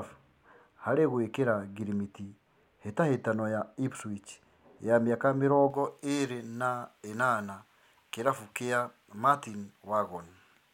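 From 5.70 s, right after "wa mĩaka", to the end at 10.73 s, the speech has pre-emphasis left on. The treble lift, here the J.17 curve, was applied without its matching de-emphasis, so the top end sits about 11 dB above 1 kHz by 10 kHz. Sibilants hiss and the sound turns thin and bright. A spectrogram shows the upper bands suddenly denser from 5.70 s onward, and the waveform gains spiky, high-frequency detail.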